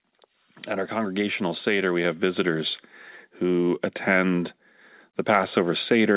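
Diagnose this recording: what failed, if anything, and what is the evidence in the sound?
Call processing failed: automatic gain rising. From 0.67 s to 2.74 s, speech and background noise swell together by about 4 dB. Because both rise at once, this is gain, not louder talking. The gain control judged the input too quiet and raised its level gradually.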